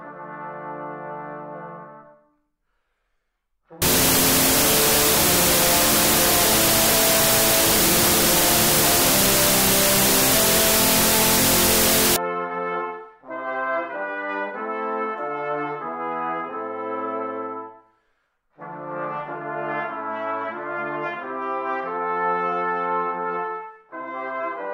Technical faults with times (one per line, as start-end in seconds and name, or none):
3.82-12.16 wrong sample width